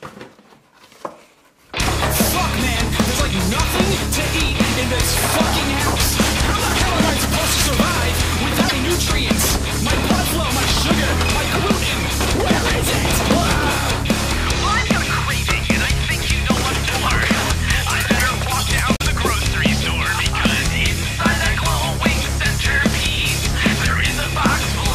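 Damaged data in a compressed stream shows up twice, from 8.65 to 8.72 s and again from 18.93 to 19.01 s, each lasting well under a tenth of a second. At those points the encoded bytes were wrong, so the decoder misread or discarded the affected frames, lost sync and had to hunt for the next valid frame header before resuming. Each event sounds like a brief blip or squawk that cuts across the audio.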